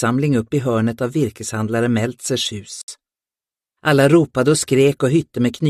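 At 2.82 s a gap at a join of encoded pieces opens for about 66 ms, until 2.88 s. Separately encoded sections were butted together untrimmed, leaving encoder start delay and end padding as a hard dropout, visible as a blank vertical band with smeared edges.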